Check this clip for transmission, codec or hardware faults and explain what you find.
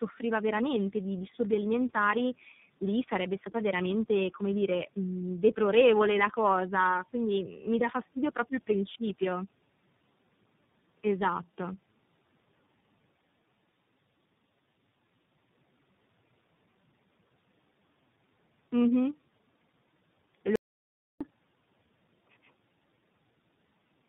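Two faults are present: tandem speech coding across the whole recording, and one dropout to silence near the end.

Tandem speech coding runs from start to finish. The speech passed through three separate low-rate speech coders in a row, with a decode and re-encode at each hand-off. The character of the damage fits a G.726 stage, then AMR-NB, then iLBC last, bridged by A-law links. Each coder models the previous one's errors as if they were speech, so the distortions stack. The result is rough, muffled and warbly, with nothing above 3.8 kHz.

The audio dropout to silence runs from 20.56 s to 21.21 s, about 0.65 s. The signal stops abruptly and is replaced by silence, with no room tone or residual noise in the gap. Speech then resumes mid-flow, and whatever was spoken in that interval is lost. The likely cause is a brief loss of the input, such as a link failure or momentary mute, while recording continued writing silence.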